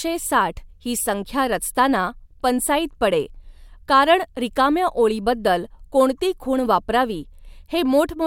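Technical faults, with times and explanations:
No technical faults detected.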